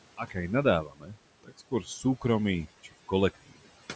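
A noise suppressor runs across the whole clip, pulling down what it judges to be steady background by about 17 dB frame by frame. The room noise, which sits about 15 dB below the speech, drops away in the gaps and surges back under each phrase. These noise suppressor artifacts run throughout, and the voice sits within a band that stops at 8 kHz.

The suppressor also mistakes parts of the speech for noise and cuts them. From 0.17 to 0.36 s, it turns down about a tenth of a second of sound by up to about 14 dB. From 0.83 to 1.16 s, the cut is deeper, about 17 dB, over roughly a third of a second. From 1.44 to 2.05 s, it drops by up to about 16 dB across a couple of tenths of a second in total. In each stretch, the affected speech sounds swallowed or faint.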